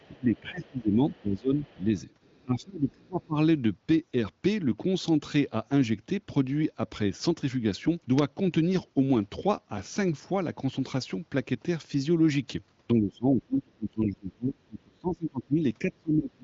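From 0 to 1.89 s the speech dips by up to about 15 dB, likely speech suppressed in double talk as the echo canceller ducks the talker while the far end also speaks. Overlapping this, a faint second voice, the other side's voice leaking through, sits about 30 dB below the talker from 0.04 to 0.79 s, then about 35 dB below at 1.10 to 1.23 s, 1.56 to 1.83 s and 2.23 to 2.42 s. This is likely residual loudspeaker echo the canceller did not remove. The speech then drops again, by up to about 25 dB, from 2.43 to 3.37 s, and from 12.93 s to the end it dips by as much as about 25 dB, both times from the same double-talk suppression. Throughout, the audio stops near 7.5 kHz, in line with AMR wideband (HD Voice) at a rate around 18 kbit/s, with little audible coding damage.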